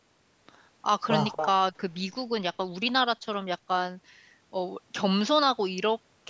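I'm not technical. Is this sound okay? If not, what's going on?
No, there's one glitch. From about 1.32 to 1.47 s you can hear an echo leak: a short repeat of the speech arriving about a quarter of a second late and only a little quieter than the original. The likely cause is that someone on the call was using a loudspeaker, and their echo canceller didn't fully remove what their microphone picked up, so a scrap of the voice got sent back.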